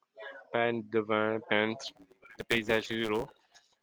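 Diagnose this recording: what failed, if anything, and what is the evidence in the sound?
From 1.87 s to the end, the speech takes on a steady buzz at about 109 Hz and starts running quick, roughly 1.09 times its normal pace, while its timbre stays about where it was. This is a block size mismatch (truncated), at the driver or buffer stage. One stage writes longer blocks than the next stage reads, so the tail of every block is dropped. Those cuts recur 109 times a second to form the buzz, and the lost material shortens the audio by about 8 percent.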